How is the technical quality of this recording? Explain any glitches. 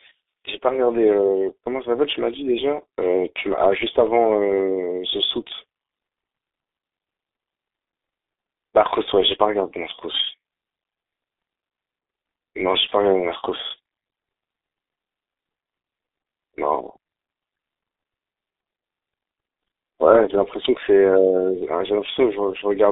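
The speech is muffled and hoarse from start to finish, with smeared consonants. This is G.723.1 codec damage: low-bitrate frames over a 300 Hz to 3.7 kHz telephone band, which fits a codec running near 6 kbit/s.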